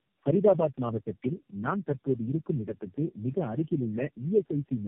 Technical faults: tandem speech coding

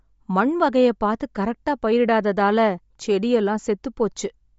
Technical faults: Bluetooth LC3 compression

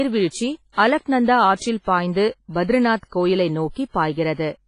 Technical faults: WMA compression; pre-echo

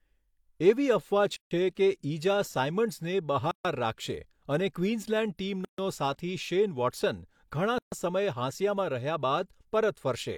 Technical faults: gap at a join of encoded pieces

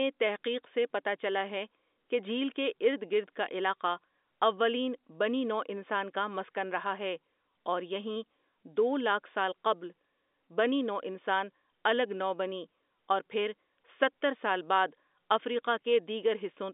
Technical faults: none

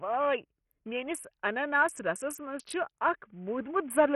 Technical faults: Bluetooth SBC compression

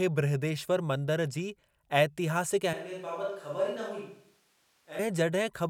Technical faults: switch to a distant microphone

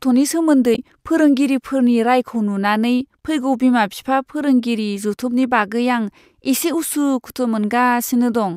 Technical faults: damaged data in a compressed stream

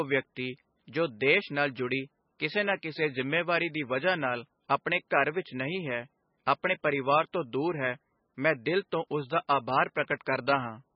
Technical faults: MP3 compression

